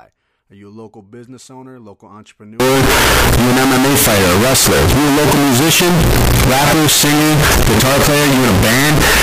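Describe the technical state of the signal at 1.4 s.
At 1.4 s the speech signal is intact, with no dropout, distortion or other fault at that point.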